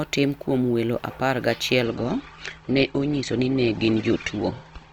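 Speech that switches to an adaptive stream at a lower bitrate at 1.84 s, lasting to the end. The treble abruptly vanishes above 8.2 kHz, consistent with a 64 to 16 kbit/s Opus switch. The spectrogram shows a sharp ceiling with no waveform gap.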